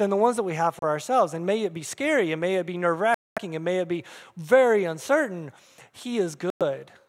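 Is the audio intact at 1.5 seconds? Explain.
Yes, the speech at 1.5 seconds plays through cleanly, with no dropout, click, distortion or other fault at that moment.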